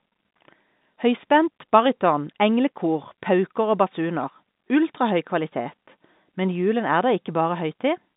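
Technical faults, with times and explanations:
No technical faults can be heard.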